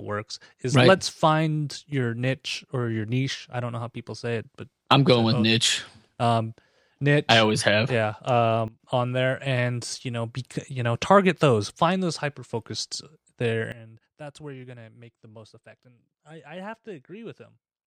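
At 8.68 s the speech and its background noise drop together by about 15 dB, recovering at 8.8 s; from 13.72 s to the end they fall about 17 dB. Each is a sudden gain jump, likely a digital level change applied without any ramp.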